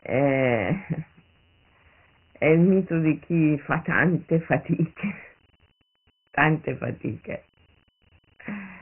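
From start to finish the speech carries Dialogic VOX ADPCM damage: nothing above 3 kHz, which fits a 6,000-sample rate, and heavy 4-bit step-size grit. Unlike a clean narrowband telephone filter, a coarse hiss rides along with the speech and rises with it.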